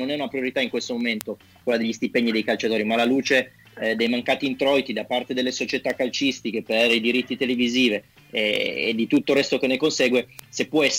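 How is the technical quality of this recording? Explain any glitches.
The recording has one fault: word clock ticks. From 0.19 s to 10.8 s, sharp ticks of uneven strength recur about every 0.2 s, around fifty in all. The receiving device runs on its own clock, roughly 100 ppm off the sender's, so each time the two clocks slip past each other a single sample is dropped or repeated, producing a click.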